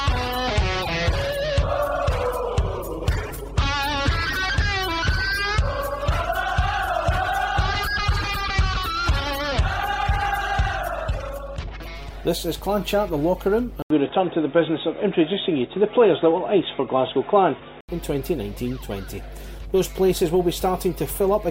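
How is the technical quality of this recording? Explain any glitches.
The recording has two clear faults: a continuous mains hum and a brief stretch where the sound changes character.

Mains hum runs throughout as a steady 50 Hz tone, fairly prominent at roughly 15 dB below the sound. It comes from power-line coupling, such as a ground loop. It is a smooth low tone rather than a harsh buzz.

From 13.82 to 17.89 s, the input was likely switched to a poorer device. The sound turns dull, with nothing above 3.8 kHz, and carries its own faint background noise about 40 dB down. An 80 ms silence marks the switch, and the level stays about the same. The gap and the new noise distinguish it from simple filtering.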